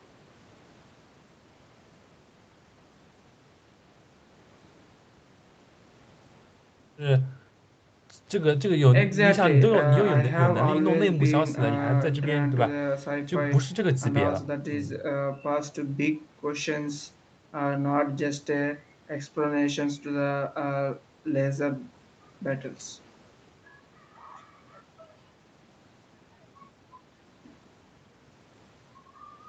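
No faults in the speech; the top end stops around 8 kHz, as expected from the call microphone processing and the Opus call path, and nothing else stands out.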